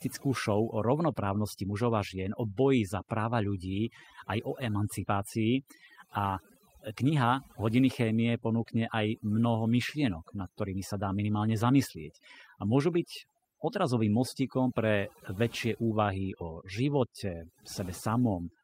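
Overdone noise removal, set far too strong, switches off frequency bands near the noise estimate, leaving near-silent gaps with twinkling specks throughout. Clock drift between sender and receiver, with the sender's clock running roughly 4 percent fast, keeps overfilling the receiver's jitter buffer for the whole clip. From 0.05 to 18.58 s, repeated timing corrections cut short pieces at uneven intervals to keep pace with that 104 percent rate, causing small recurring skips.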